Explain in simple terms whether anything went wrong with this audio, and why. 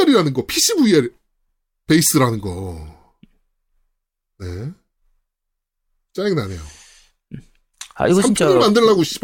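Nothing went wrong here: the speech holds steady throughout, with no audible fault at any point.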